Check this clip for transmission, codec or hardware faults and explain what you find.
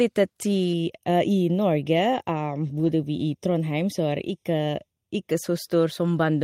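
Two faults are audible in this speech clip.

From 0.73 to 5.31 s the sound turns hollow and phasey, with fixed notches in the spectrum. This is channel delay (comb filtering): one channel arrives roughly 0.3 ms late, and summing to mono cancels shared content at evenly spaced frequencies, the first near 1.5 kHz.

From 2.75 to 2.89 s the audio briefly turns rougher and noisier, without any gap. This is a lost packet rebuilt from error correction: the decoder played low-bitrate copies carried in later packets, about 80 ms of rebuilt audio, which fits four separate lost packets.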